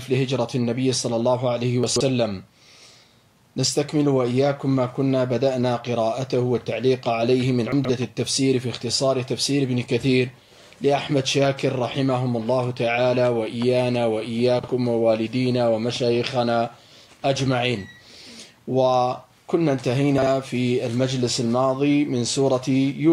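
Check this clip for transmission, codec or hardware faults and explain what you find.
Four brief chunks out of order faults occur, at 1.84–2.01 s and 7.72–7.89 s (a block about 43 ms long played three blocks late), and at 14.59–14.68 s and 20.18–20.27 s (one block late). A late-arriving block plays after its successors, giving a jumbled flick. The waveform and spectrogram show three abrupt vertical discontinuities around each misplaced block.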